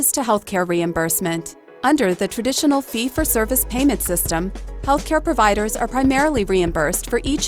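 At 4.06 s a sharp snap cuts through the sound, a tight burst over in well under 20 ms and sitting on top of everything rather than replacing it. It peaks at around -20 dBFS. This is an electrical switching spike, likely from a nearby switch, motor or static discharge arcing briefly and the audio line picking up that jolt as an added click.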